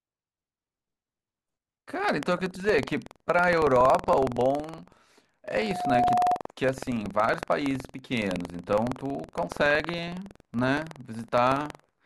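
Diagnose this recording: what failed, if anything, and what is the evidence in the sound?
Buffer tearing at the driver or buffer stage runs through the whole recording as a rattling buzz at 21.5 Hz, which fits a 2048-sample buffer. The writer and reader cross every period, splicing in a sliver of audio roughly 150 ms old. A spectrogram shows regular vertical striations, and the waveform shows hard steps at each join.

Loudspeaker feedback squeal, an acoustic loop from loudspeaker to microphone, runs from 5.51 to 6.41 s as a 721 Hz tone. Loop gain above one lets it swell over about half a second to about 5 dB above the speech. A spectrogram shows one brightening horizontal line, and the waveform shows a growing sinusoidal envelope.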